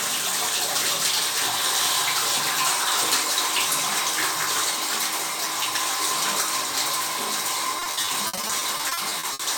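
At 1.86 to 1.88 s a loud pop, a few dB above the surrounding sound, likely from a voltage glitch, shows as one sharp waveform spike and a thin full-band vertical line.

From 7.79 to 9.41 s repeated packet loss patches about eighteen gaps of up to 60 ms by extending prior sound, heard as choppy, robotic audio with repeated, smeared spectrogram blocks.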